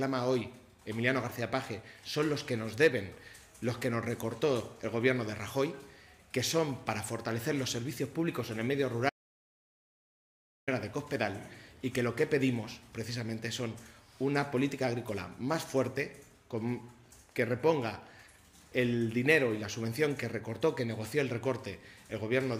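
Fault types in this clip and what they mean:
Audio dropout to silence: the sound cuts out for 1.58 s, 9.10 to 10.68 s, into silence without room tone, likely from lost input.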